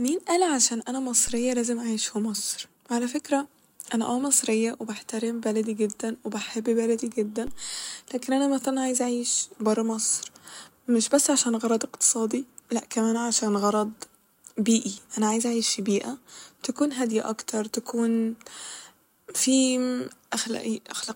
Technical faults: DC step

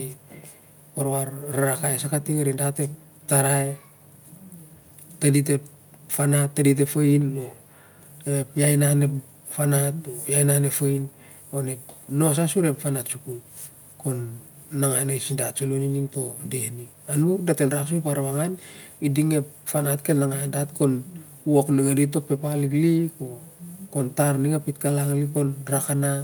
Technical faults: none

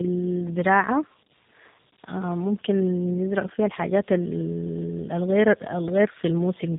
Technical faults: tandem speech coding

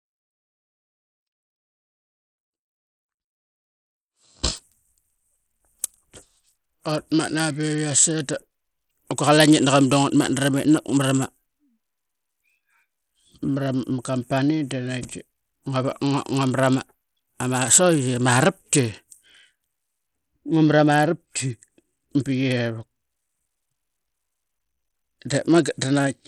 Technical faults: Bluetooth SBC compression; audio dropout to a faint residue

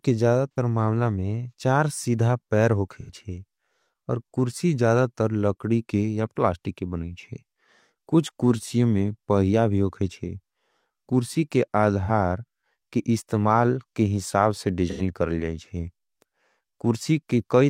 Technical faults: AAC frame loss with concealment

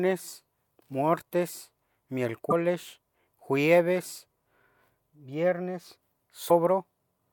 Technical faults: damaged data in a compressed stream

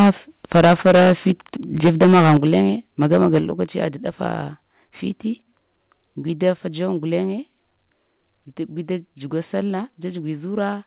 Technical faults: microphone overload; microphone volume stepped down

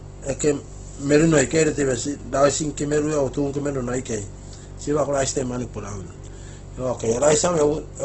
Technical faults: Opus compression

